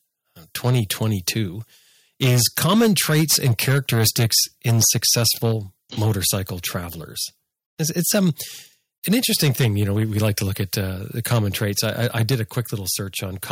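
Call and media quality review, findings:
Harsh, crackling edge on the loudest syllables at 0.66–1.41 s, 2.22–5.53 s, 6.02–6.36 s, 7.99–8.29 s, 9.11–10.79 s and 11.31–12.6 s. Likely microphone overload: input gain too high, peaks about 4–9 dB past converter full scale, tops flattened on a few percent of samples.

Sudden drop in level of speech and background at 2.26 s, 9.13 s and 12.35 s, each about 2 dB, landing inside clipped passages. Likely microphone volume stepped down: call software reacting to clipping by cutting device input gain in one step.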